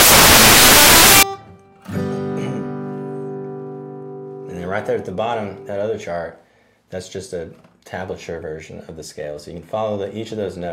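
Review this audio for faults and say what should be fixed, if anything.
Samples built from the wrong bytes, from 0.0 to 1.23 s: the opening second or so is a blast of loud, harsh broadband noise instead of the intended sound. The reader is assembling each sample from the wrong bytes, either shifted by one or taken in the wrong order, so the rapidly fluctuating low-order bits land in the most significant position and swamp the real waveform. To prevent it, make the decoder confirm byte order, sample width and alignment against the file header before reading the first frame.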